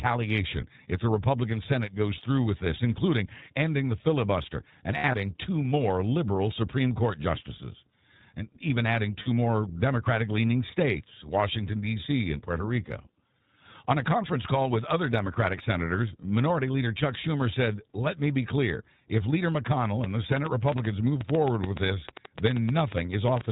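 Throughout, the speech sounds muffled and slightly rough and synthetic, with nothing above 4 kHz. That is the iLBC codec, a narrowband VoIP coder whose damage is plainly audible here. Its character is consistent with the 15.2 kbps mode, coding each roughly 20 ms frame independently.

From 4.98 to 5.15 s, between "ending the filibuster and" and "two more liberal", the speech briefly turns into a held, buzzy vowel. These are lost iLBC frames: about 100 ms of audio went missing, scattered over 160 ms, with the longest gap around 70 ms. The decoder filled each gap by repeating the last pitch cycle mixed with noise. The voice recovers almost at once because the frames stand alone. A shorter 40 ms loss follows at 9.22 to 9.28 s, just after "justices and even adding".

From 20.04 to 23.42 s, a train of clicks ticks over the sound at an uneven pace, about 7.7 per second and roughly 30 in all. They peak around 10 dB above the speech, and the likely cause is interference or a faulty connection or power supply injecting pulses.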